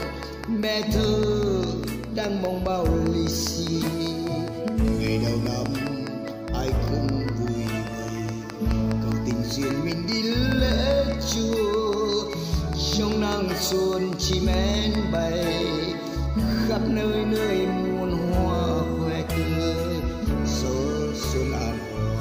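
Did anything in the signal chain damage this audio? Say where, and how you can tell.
Yes. A train of clicks runs from 0.03 s to about 15.2 s: roughly 70 near-identical pulses at a steady 4.96 per second, peaking about 10 dB above the signal and ticking through pauses as well. Because they keep an even pace and don't follow the programme level, they are not clipping crackle or buffer dropouts, which would leave gaps. The likely cause is periodic interference coupling into the analogue wiring or a struggling interface.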